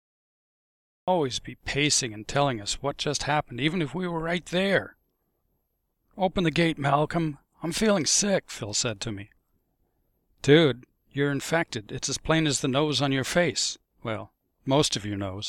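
From 0 to 1.08 s there is only digital silence, then a cut-off start: capture began late, so the sound enters abruptly mid-event, with no natural attack or fade-in.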